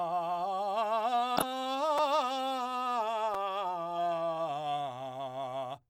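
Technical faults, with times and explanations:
1.37 to 1.43 s, corrupt frame decoded: damaged data in a couple of compressed frames was played anyway. Energy lands at wrong frequencies, giving a brief chirp or burst of noise in the music.
1.98 s and 3.34 s, repeated buffer: late audio made the device replay a 5.33 ms piece, twice then once. The hard joins sound like short clicks or brief buzzes, which fits a 256-sample buffer.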